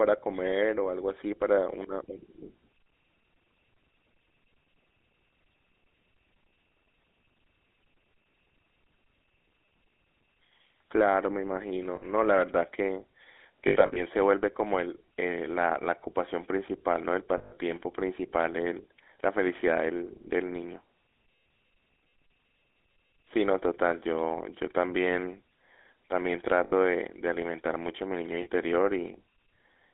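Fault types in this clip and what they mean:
GSM full-rate codec, throughout: a vocal-tract model driven by regular pulses, heard over a line limited to 250 Hz to 3.6 kHz, with plainly audible buzzy, gravelly roughness.
Lost GSM frames, at 11.96, 13.68 to 14.02, 17.38, 26.64 and 28.42 s: missing frames are filled by repeating the last good one, briefly freezing the sound into a rough metallic ring.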